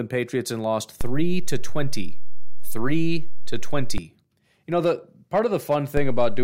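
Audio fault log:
1.01–3.98 s, DC step: a low thump just after "and lost", another where it returns. The zero line jumps by about −15 dBFS, holds, then steps back.
5.97 s to end, DC step: a low thump as the baseline shifts by about −16 dBFS and stays offset until the clip ends.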